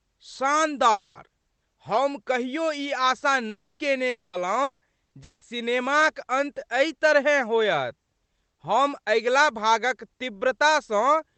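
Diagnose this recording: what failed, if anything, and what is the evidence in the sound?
Network stage, most likely long network dropouts: the sound freezes into a fading buzz or hiss at 0.91–1.18, 3.49–3.82, 4.09–4.36, 4.63–4.84 and 5.23–5.44 s. The receiver concealed 180–300 ms each time, with short silences after the later ones, then resumed with that stretch missing.

Also a burst of packet loss at 5.05–5.14 s. About 60 ms never arrived, so the decoder stretched the last sound into a brief, dying buzz or hiss and jumped ahead. The Opus call path's narrowed top end, around 8 kHz, sits underneath all this.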